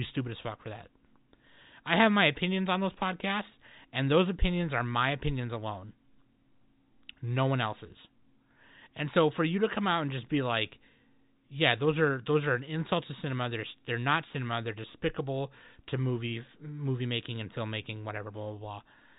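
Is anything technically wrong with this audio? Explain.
No, nothing technically wrong can be heard in this speech recording. It comes through G.711 telephone coding, likely A-law at 64 kbps, so nothing reaches above about 3.8 kHz and at most a faint quantisation hiss follows the level of the voice.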